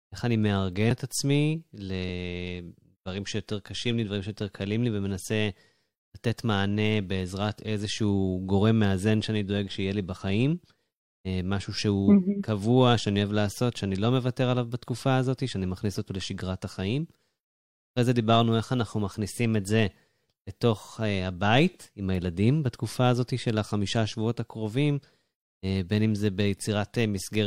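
At 0.91 s the speech jumps ahead, about 70 ms missing; this is likely a dropped buffer (overrun), unread samples overwritten before capture.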